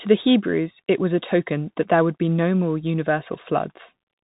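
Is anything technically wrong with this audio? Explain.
Yes. Throughout, the speech sounds muffled and narrow, with nothing above 3.8 kHz, plus plainly audible grit on s sounds and loud peaks. The cause is the Bluetooth CVSD headset codec, which fits a 64 kbps link. It sends one up-or-down bit per sample with an adapting step, and fast loud changes outrun that step.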